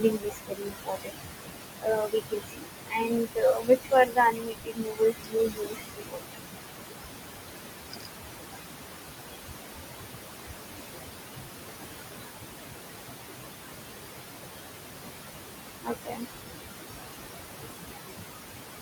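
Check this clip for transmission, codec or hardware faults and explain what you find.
A noise suppressor is the main fault here, and it shows up two ways: artifacts across the whole clip and repeated cuts into the speech itself.

Noise suppressor artifacts run from start to finish. The room noise sits only about 4 dB below the speech, so the suppressor works hard, pulling the bands it judges to be steady noise down by about 20 dB frame by frame. With noise this close to speech level, its decisions swing constantly. The background drops out between phrases and swells back under them.

Speech cut by the noise suppressor occurs at 0.0–1.25 s, 1.79–2.69 s, 2.87–6.38 s, 7.91–8.08 s and 15.81–16.48 s. Because speech and noise are so close in level, the suppressor mistakes stretches of speech for background and turns them down by about 21 to 22 dB. Within each span most of the speech is affected. 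The longest, from about 2.9 to 6.4 s, loses roughly three seconds of speech, which sounds swallowed and faint. The shortest, near 8 s, is a brief dip.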